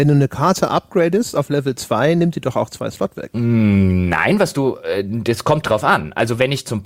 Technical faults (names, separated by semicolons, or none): none